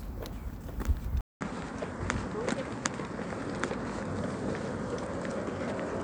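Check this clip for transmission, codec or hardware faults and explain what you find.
There's one fault, and it runs from 1.21 s to the end. At that point the sound drops out for about 200 ms, then returns duller and narrower, with nothing above 9.3 kHz, and a new noise floor sitting roughly 40 dB under the signal. Loudness barely changes. That pattern likely comes from an input switched to a poorer device mid-recording: a different capture path with a tighter bandwidth and its own background hiss, swapped in after a brief gap.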